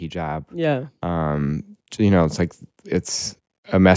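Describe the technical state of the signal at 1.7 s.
At 1.7 s the signal is partway through an automatic gain rising that runs from 0.12 to 3.95 s. The gain control judged the input too quiet and keeps lifting its gain, by about 11 dB over the span, so speech and background noise swell together. On the waveform the envelope widens steadily, noise floor included. On a spectrogram every band brightens evenly beneath the call processing's ceiling at 8 kHz.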